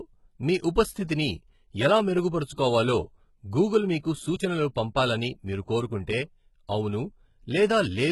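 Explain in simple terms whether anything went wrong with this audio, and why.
Yes, the speech has a gritty, metallic edge from start to finish, especially on s sounds, and nothing sits above about 11.8 kHz. That's likely HE-AAC compression: the top end is rebuilt from copied lower frequencies rather than kept, so it sounds wrong.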